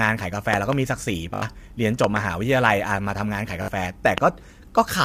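Throughout the speech there is plainly audible low-delay AAC compression, likely AAC-ELD at a low bitrate around 32 kbps. At this low bitrate its coarse coding leaves noise between the pitch harmonics, so the voice sounds rough and grainy. On a spectrogram the harmonic stripes are smeared, with noise filling the gaps between them, and the top band looks thinned or patchy, as if it had been synthesised rather than carried through.

From 0.54 to 0.75 s a loud pop arrives as two sharp hits in quick succession, peaking about 15 dB above the speech. The speech continues underneath. This is likely the mark of an electrical transient, such as a plug, switch or static discharge. On the waveform it shows as tall spikes standing clear of the speech, possibly with a brief ring after each, and on the spectrogram as thin vertical lines running up through every frequency.

From 1.34 to 1.42 s a repeated buffer produces a stutter. 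One 20 ms piece plays four extra times with a hard join at each repeat, so about 70 ms of new audio is lost. The waveform shows an identical short shape copied end to end, with a step at each seam. On the spectrogram it appears as a repeating block with faint vertical lines at the seams.

A second double pop runs from 2.04 to 2.19 s, about 20 dB above the signal. At 3.62 to 3.68 s a further repeated buffer plays its 20 ms piece three extra times, again losing about 70 ms. A single pop at 4.18 to 4.20 s, about 20 dB up, looks like the earlier ones: one isolated spike and a full-height vertical line.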